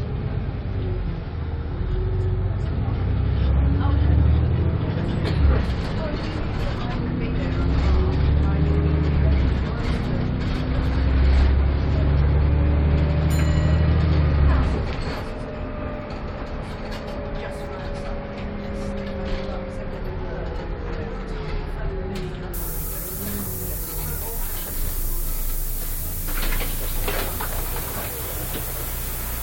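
At 6.40 s and again at 12.21 s, there are frames out of order. Two neighbouring runs of frames were swapped and decoded in that order. The first exchanges blocks of about 46 ms, which fits two frames each. The second, ending at 12.35 s, exchanges blocks of about 70 ms, which fits three frames each. Each is a brief garbled flutter. No time is lost.

From 22.54 s to the end, there is low bit depth with noise shaping. The signal is coarsely rounded, which points to about 5 bits. The rounding error is pushed up in frequency. The result is a steady, thin hiss that climbs sharply toward the top of the band. It is strong, nearly as loud as the sounds themselves.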